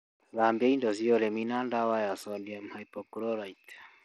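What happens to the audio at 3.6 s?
At 3.6 s the speech carries the same damage heard across the whole clip, most likely Bluetooth SBC compression at a low bit pool, which fits a stream of about 80 kbps. The top sub-bands are starved of bits, so the treble flickers in and out, while coarse quantisation of the remaining bands adds a gritty, aliased edge. On a spectrogram the upper range shows blocky gaps and patchy energy. The waveform looks largely normal.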